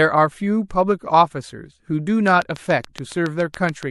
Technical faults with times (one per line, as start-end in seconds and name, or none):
0.68-0.70 pre-echo
2.28-3.91 train of clicks
2.93-2.95 pre-echo